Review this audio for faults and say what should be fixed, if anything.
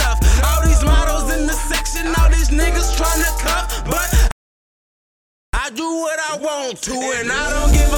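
A playback stall silences the output from 4.31 s to 5.53 s, a gap of about 1.22 s, and the sound stops abruptly in mid-flow rather than fading. When it returns, it resumes without any transition. The likely cause is the player running out of buffered data, or its audio thread being blocked long enough that no samples reached the output device. To prevent it, enlarge the playback buffer and run audio output on a dedicated, high-priority thread that never waits on I/O.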